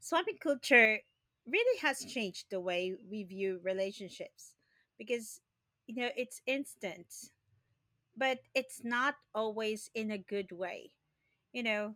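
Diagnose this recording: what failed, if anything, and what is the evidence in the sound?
Sudden gain jump from 0.62 to 0.85 s, before "really has changed the": speech and noise step up about 6 dB together, likely unramped digital gain.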